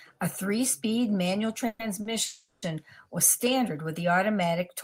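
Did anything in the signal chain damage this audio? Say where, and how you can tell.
Yes. At 1.67 to 1.81 s and again at 2.25 to 2.64 s, the speech stops moving forward and the last sound smears into a fading buzz instead of true silence. It then resumes exactly where it left off, so nothing is lost but everything after is pushed later by about 120 ms and then 370 ms. This is call audio freeze at the network stage, likely from packets held up in transit while the receiver's jitter buffer ran dry and it improvised filler.

At 2.01 to 2.07 s there is a brief sticking point where one sound is held about 40 ms too long, with a slight buzzy dip, before the speech carries on with nothing skipped. This is a short stall from a late packet, also at the network stage. One packet missed its playout deadline, the jitter buffer emptied, and the receiver stretched the previous audio until the packet arrived, adding that 40 ms of delay.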